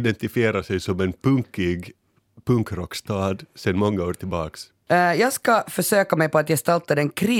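No technical faults can be heard in the speech.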